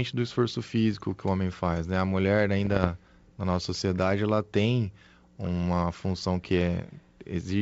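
From 2.59 to 2.89 s the speech breaks into bit errors on an ADPCM link: clicks and short rough bursts with the level jumping briefly. Flipped bits, likely around half a percent of them, corrupt the decoder's step size and predictor, so each error smears on for several milliseconds. The damage spread suggests roughly fifteen frames. A waveform shows spiky excursions and uneven envelope steps, and a spectrogram shows vertical broadband streaks across the G.722 band, which sounds like full-rate 64 kbit/s coding.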